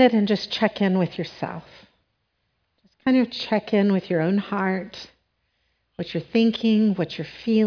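No technical faults detected.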